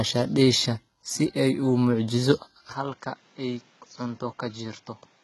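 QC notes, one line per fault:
Throughout, HE-AAC compression: the speech sounds heavily coded, with treble that is gritty and lispy on s sounds and nothing above about 11.8 kHz. This is likely a low-bitrate HE-AAC encode, near 16 kbps, rebuilding the upper band from copied lower harmonics that no longer line up.
2.73 to 5.23 s, input switched to a poorer device: right after "si ay u muujiso" the sound turns dull and boxy with no gap, nothing above about 7.6 kHz, roughly 10 dB quieter, with a new noise floor around 30 dB down. This likely comes from the input moving to a narrower-band microphone or headset profile.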